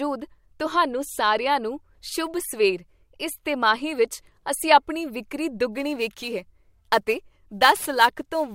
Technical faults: sample clock jitter

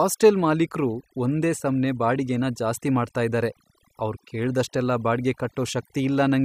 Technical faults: overdone noise removal

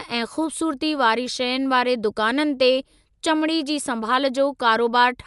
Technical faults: Dolby Digital compression

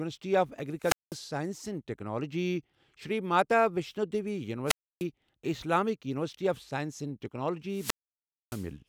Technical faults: wireless microphone squelch dropout

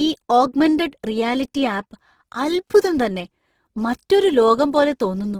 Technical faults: Opus compression

